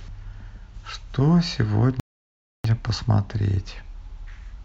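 At 2.00 s the player's buffer runs dry: playback has consumed all the downloaded audio and must halt until the next portion arrives. This rebuffering stall lasts until 2.64 s, inserting about 0.65 s of dead silence into the speech. When data returns, the speech picks up at the exact point where it was cut, so nothing is skipped or repeated. The only effect is an abrupt gap that stretches the timing.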